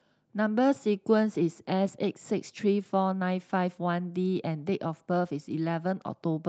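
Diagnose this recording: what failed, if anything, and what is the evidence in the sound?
Nothing failed; the call path behaves as designed.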